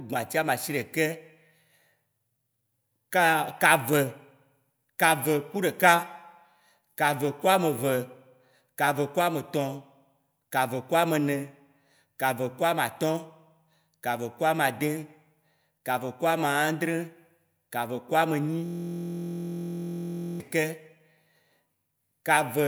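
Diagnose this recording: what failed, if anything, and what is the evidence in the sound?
Driver or buffer system hang loop: the hardware kept replaying one 23.22 ms buffer, which fits 1024 samples, heard as a steady 43.1 Hz buzz from 18.66 to 20.40 s.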